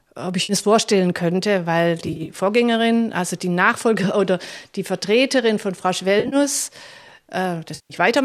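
Four spots of AAC frame loss with concealment, where the decoder patches over missing frames with a guess built from the last good spectrum. The first runs 0.43 to 0.53 s, about 60 ms, just before "es vorstellen könnte weil", and comes out as a brief smeared, noisy smudge. Right after "es vorstellen könnte weil", 2.06 to 2.29 s holds about 110 ms of loss scattered over 220 ms, in short gaps of roughly 30 ms at most, so it flutters and sounds phasey. At 6.20 to 6.36 s it's 90 ms spread across 120 ms, the longest run around 40 ms, with a similar smeared, phasey patch. The longest is 7.75 to 7.94 s, a solid 150 ms, where the fill-in audibly sags toward silence before the sound comes back. The gap lengths fit 10 ms frames, which squares with the light coding damage of the underlying stream, likely low-delay AAC (AAC-ELD) at 64 kbps.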